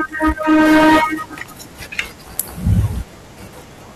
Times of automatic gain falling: none

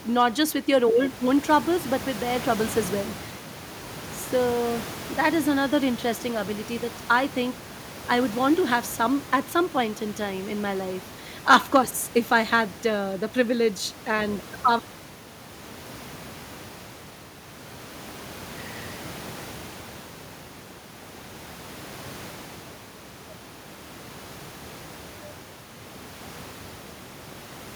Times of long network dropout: none

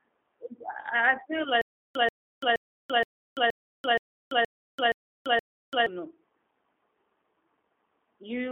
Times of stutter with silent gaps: 1.61-5.86

